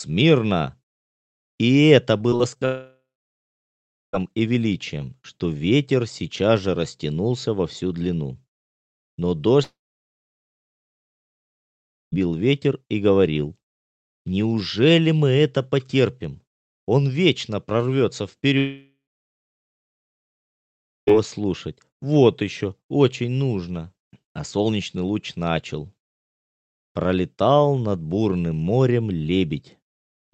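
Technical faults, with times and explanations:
2.17–2.63 s: repeated packet loss (robotic sound). Five short gaps, the longest 40 ms, are patched by repeating the preceding sound, leaving a choppy, robotic texture.
2.65–4.15 s, 9.63–12.14 s, 18.58–21.13 s: long network dropout. A fading buzz gives way to silence, likely from lost packets, and the audio resumes with about 1.5, 2.5 and 2.5 s gone.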